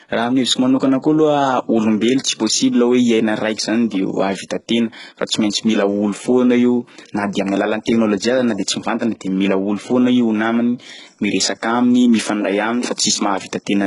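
HE-AAC compression, throughout: heavy codec damage, with nothing above 11.1 kHz and a synthetic top end that fits a bitrate around 12 kbps. The likely cause is spectral band replication patching copied lower bands into the treble, leaving misaligned harmonics and gritty, lispy s sounds.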